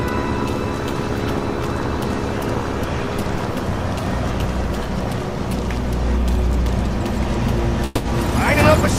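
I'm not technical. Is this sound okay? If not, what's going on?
No. From 7.85 to 8.07 s the sound smears into a fading buzz for about 0.2 s, then resumes with that part skipped. This is likely a long network dropout. Unlike a quick click or glitch, it lasts long enough to clearly lose a chunk.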